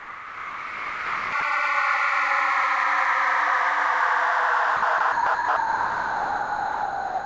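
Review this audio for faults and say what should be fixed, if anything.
Sound dropped by the voice detector: the sender's detector treated the audio as background and stopped transmitting, likely because it misjudged the sound, and the receiver substituted comfort noise. The real sound is replaced from 0.00 to 1.32 s, 1.40 to 1.42 s, 4.76 to 4.82 s, 4.98 to 5.00 s, 5.12 to 5.26 s, 5.34 to 5.48 s and 5.56 s to the end. The sound returns each time the detector triggers again, except after the last span, which runs to the end. In the G.722 call path that carries it, nothing above 8 kHz comes through.

To prevent this, disable voice activity detection and discontinuous transmission on the sender, or make the detector less aggressive so that quiet and non-speech sounds keep being sent.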